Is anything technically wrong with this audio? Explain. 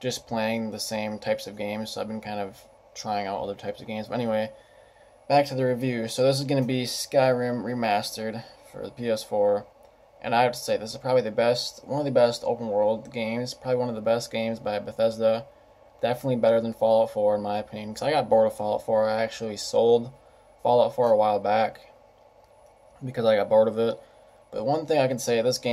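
No, nothing technically wrong stood out on listening to this audio.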